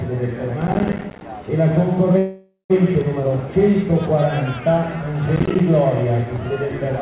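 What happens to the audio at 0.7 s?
At 0.7 s the audio sits inside a burst of processor overload crackle lasting from 0.62 to 1.21 s. The processor repeatedly misses deadlines for buffers of around 10 ms, and each miss leaves a hard-edged gap of silence. Some twenty of these gaps produce a gritty tearing.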